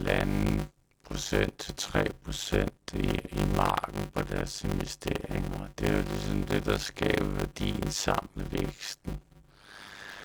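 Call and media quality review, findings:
Block size mismatch (padded), throughout: 100 Hz buzz, speech at 0.53x speed, timbre intact. Short writes, fits 256 samples, zero-filled into larger read blocks.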